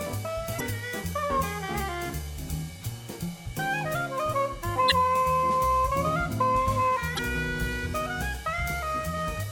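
At 0.56 to 0.61 s, 4.87 to 4.92 s and 7.15 to 7.19 s the music breaks into a brief chirp, squawk, click or short hole, each about 44 ms long. That's damaged data in the compressed stream: the decoder hits corrupted frames, loses sync and hunts for the next valid header.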